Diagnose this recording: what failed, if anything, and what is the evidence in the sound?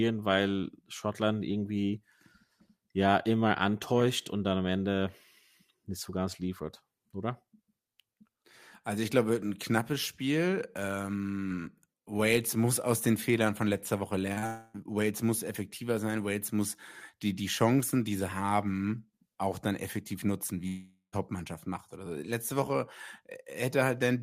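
At 14.33 to 14.38 s and again straight after, 14.38 to 14.44 s, the sound briefly smears and wobbles. This is short concealed packet loss at the network stage: two consecutive 40 ms gaps arrived too late, and the decoder filled them by extending the preceding sound.

From 14.46 to 14.75 s the sound stretches into a fading buzz with no silence. From 20.67 to 21.14 s a similar fade runs about 450 ms before roughly 110 ms of silence. When the sound resumes, material is missing. The likely cause is a long network dropout that concealment could not bridge.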